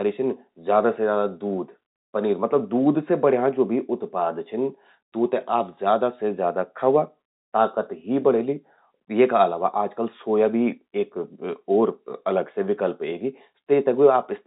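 Nothing in the speech stood out as a technical fault on listening.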